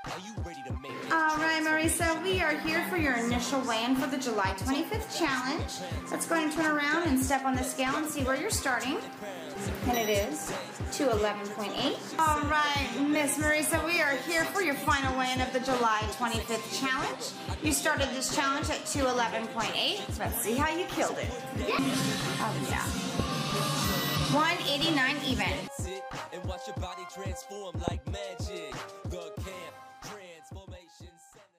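The audio has two loud pops, at 23.20–23.22 s and 27.88–27.90 s. Each is a single sharp click, roughly 15 dB and then 20 dB above the sound, which continues underneath. The likely cause is a sudden voltage spike from a switch, plug or static.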